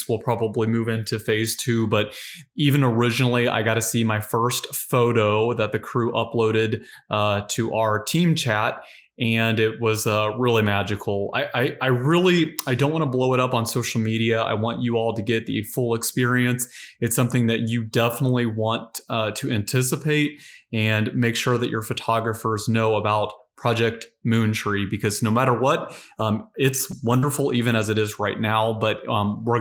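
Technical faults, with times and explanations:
26.92 to 28.07 s, lost packet rebuilt from error correction: a stretch of about a second, around "matter what um it's", where the speech turns grainy and noisy in short flecks but never drops out. Twelve separate 20 ms packets went missing, spaced every few tens to a couple of hundred milliseconds. Each was replaced by the low-bitrate backup copy carried in the following packet, so there is no gap, but those frames are coarser and noisier.
27.18 to 27.24 s, short concealed packet loss: a brief smear or wobble in the middle of that rough patch, again just after "matter what um it's". About 40 ms of audio arrived too late to use or never arrived, and no backup copy was available. The decoder filled the gap by continuing the last sound it had, extending its pitch or shaped noise, then crossfaded back into the real signal. That invented bridge is what blurs the sound.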